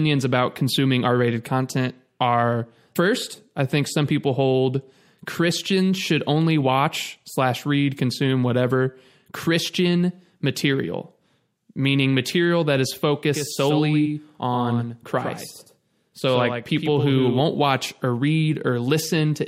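From 13.29 s, after "meaning material that is", to 17.41 s, before "watch or", the speech carries a doubled audio track: a second copy trails by roughly a tenth of a second, somewhat quieter. It's likely an edit or a second capture path, and unlike reverb it has no decay and starts and stops abruptly.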